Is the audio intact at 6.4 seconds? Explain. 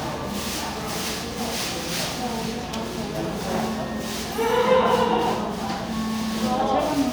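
Yes, the audio is intact at 6.4 seconds, with no fault at that moment.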